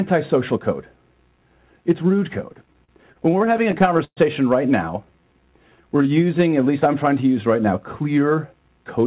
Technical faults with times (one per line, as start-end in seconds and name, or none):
2.52-4.19 repeated stalls (stutter)
5.05-6.68 jitter buffer slow-down
8.53-9.05 jitter buffer speed-up